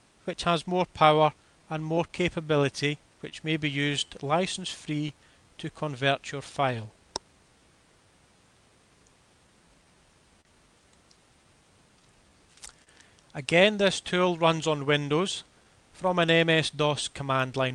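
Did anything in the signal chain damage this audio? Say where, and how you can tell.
Yes, and it's all at the network and jitter-buffer stage. The sender's clock runs slow against the receiver's, by roughly 3 percent, so the buffer keeps draining and the receiver has to keep patching time back in. That clock drift between sender and receiver underlies everything below.

The repeated timing corrections run from 0.52 s to 17.38 s. The receiver keeps repeating short pieces to stay in step, so playback sits at about 98 percent speed, adding roughly 300 ms overall. The edits are small and unevenly spaced.

There are scattered short gaps in two stretches. About five fall between 2.08 s and 6.80 s, together around 70 ms. About four fall between 12.84 s and 17.56 s, together around 50 ms. None is longer than about 30 ms. Each late packet was covered by continuing the last sound, so you get brief smears rather than real holes, and nothing goes missing.

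At 10.41 to 10.47 s there's a short stall from a late packet. The buffer ran empty, the receiver held the last sound for 38 ms until the packet arrived, then carried on from the same spot. So a sound hangs on too long there, but nothing is lost.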